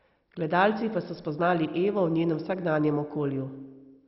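From start to end, MP2 compression is likely: nothing sounds above 5.6 kHz, so the speech is dull. Heavy quantisation gives a gurgling, granular edge, which fits a low bitrate near 32 kbps.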